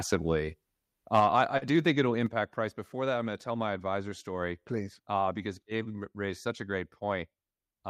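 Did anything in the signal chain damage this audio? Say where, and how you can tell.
Yes. Microphone overload, 1.14 to 1.25 s, just before "I I do": the loudest peaks sound flattened and crackly, about 4 dB over full scale, with a small share of samples cut off. This happens at the converter, likely from the input volume being set too high.

Microphone volume stepped down at 1.2 s and again at 2.27 s: the level drops abruptly, by about 4 dB and then about 6 dB, the first drop landing inside the distorted peak. This is in call processing, likely automatic gain control lowering the device input after detecting overload.

Short stall from a late packet, 1.57 to 1.65 s, right after "I I": a sound is held unnaturally long, with about 44 ms of stretched fill and nothing lost. This is on the network side: the jitter buffer ran dry and held the last sound until the late packet arrived.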